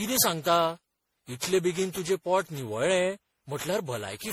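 Speech throughout carries generation loss: a swirly, smeared, hollow quality beyond what a single 64 kbit/s MP3 pass would give, with blurred attacks. The likely cause is repeated decoding and re-encoding, perhaps around fifteen times, each pass shifting the frame grid and compounding noise and spectral holes.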